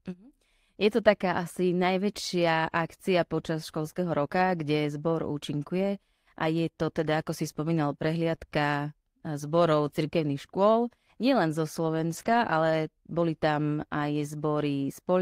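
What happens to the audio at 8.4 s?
Short concealed packet loss from 8.35 to 8.39 s, just after "teda ako si spomínal": about 20 ms never arrived, and the decoder extrapolated the preceding sound, giving a brief smear.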